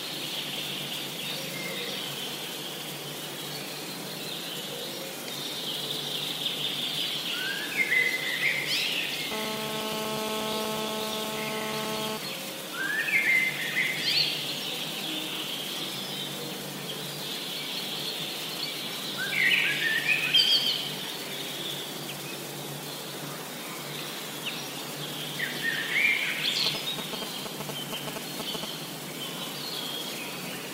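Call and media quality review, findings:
GSM phone buzz, 9.32 to 12.18 s. Hard, raspy 217 Hz buzz with dense harmonics, about 2 dB below the signal. Nearby 2G handset in a call. Its transmit bursts get rectified in the audio front end. Nearly steady.

GSM signalling bursts, 26.66 to 28.65 s. Galloping dit-dit-dit ticks and short 217 Hz buzzes, roughly level with the signal. Nearby 2G handset sending brief signalling bursts. These get rectified in the audio circuit as before.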